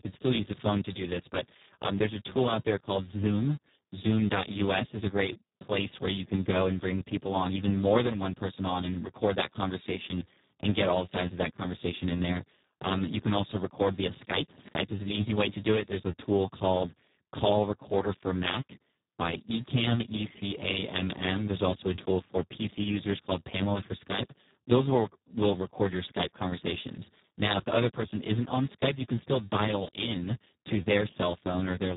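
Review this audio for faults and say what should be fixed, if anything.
The Speex codec runs through the whole clip, heavily damaged. Starved excitation makes the speech hoarse, buzzy and near-robotic, which fits a setting around 4 kbps. Unlike a plain band limit, which stays clean, the roughness sits inside the voice, and nothing remains above 3.8 kHz. To prevent it, encode at a higher Speex quality or switch to a modern wideband codec such as Opus.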